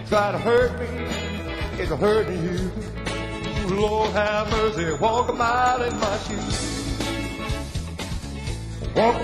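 From 0.08 to 6.38 s there are periodic USB or driver dropouts. Every 0.1 s, something stalls the audio path. About half a millisecond is lost each time, replaced by silence. Around seventy gaps result. They sound like a steady ticking while sound plays.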